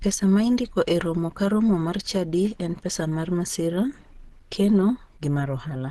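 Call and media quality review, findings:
Opus compression, throughout: likely low-rate Opus encode, consistent with about 16 kbps and hybrid speech mode. Speech muffled and hoarse, codec damage plainly audible; hard band limit, nothing above 12.1 kHz, as the encoder narrows bandwidth to fit its bit budget.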